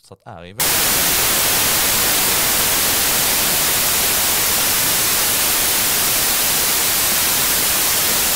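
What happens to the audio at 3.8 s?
At 3.8 s the speech is buried under samples built from the wrong bytes, from 0.60 s to the end: misassembled bytes push low bits high, giving loud white noise and a flat spectrogram.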